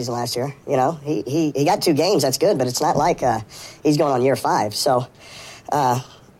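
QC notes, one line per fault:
Throughout: wrong sample rate. Audio runs 1.38 times fast and about 5.6 semitones high, which fits 32 kHz material played at 44.1 kHz without conversion.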